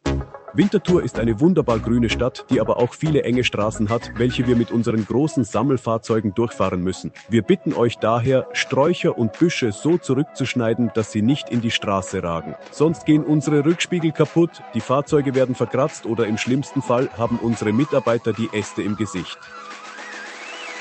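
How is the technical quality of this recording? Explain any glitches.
Nothing stood out on listening, so there are no glitches to explain in this recording.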